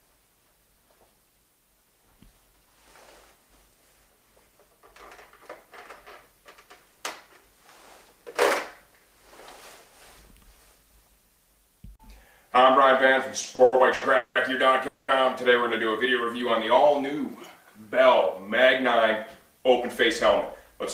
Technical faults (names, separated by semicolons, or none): repeated stalls (stutter); call audio freeze